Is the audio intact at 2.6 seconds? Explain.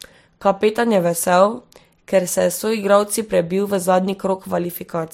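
No. At 2.6 s, as throughout, the speech has a smeared, swirly coarseness of layered compression artefacts, with nothing above 16.4 kHz. This is likely transcoding between lossy codecs: the sound points to a low-bitrate Vorbis encode re-encoded as MP3, stacking both codecs' damage.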